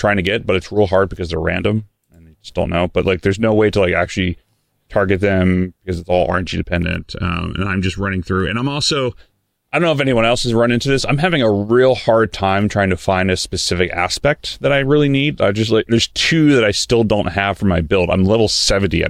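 From 6.83 to 9.14 s, channel delay (comb filtering) makes speech hollow: a sub-millisecond lag notches it from around 700 Hz, fixed, not sweeping like flanging.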